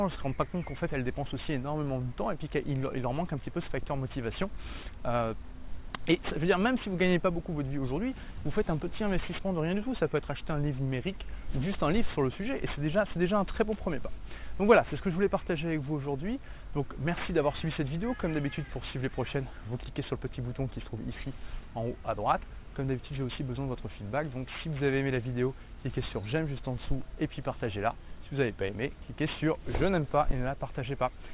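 Throughout the clip, the audio was resampled to a lower rate without an anti-alias filter first, which fits a drop to an 8 kHz rate. Content above the 4 kHz fold point reflects back as unrelated tones, roughly 20 dB below the signal, giving gritty, metallic aliasing that crowds the band edge.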